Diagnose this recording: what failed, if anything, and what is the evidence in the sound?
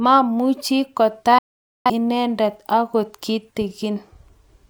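Digital broadcast dropout at reception, 1.38 to 1.90 s: the speech fades to silence within about 3 ms while the receiver mutes on failed frames, losing that stretch.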